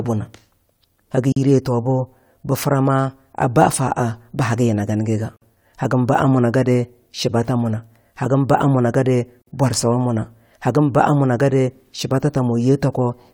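At 1.32 s the speech drops out for about 41 ms, then resumes where it stopped. It happens again at 5.36 s and 9.42 s, each time for about 53 ms. The gaps fall every 4.0 s. This is a gap at a join of encoded pieces. Each piece was encoded on its own and joined untrimmed. The encoder's start-up delay and last-frame padding stayed in. Each join opens a short silence with smeared edges.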